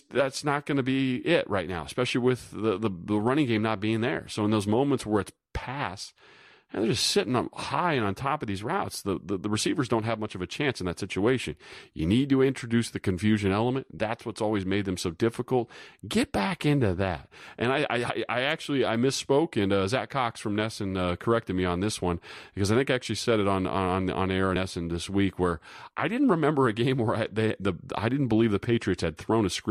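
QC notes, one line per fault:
10.27 s, 13.97 s and 24.56 s, compressed frames skipped: the decoder dropped whole compressed frames, either missing from the file or rejected as damaged. The speech jumps ahead by a few milliseconds, then about 30 ms, then about 70 ms, which points to anywhere from a couple to several frames.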